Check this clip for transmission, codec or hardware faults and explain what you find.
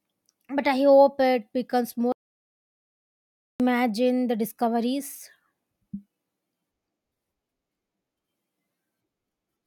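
One fault is present: an audio dropout to silence from 2.12 to 3.60 s, about 1.48 s long. The speech cuts off abruptly into digital silence with no room tone, then resumes mid-flow, likely because the input signal was lost while recording continued writing silence.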